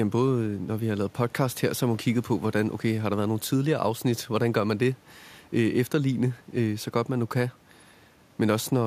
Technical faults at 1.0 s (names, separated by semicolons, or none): none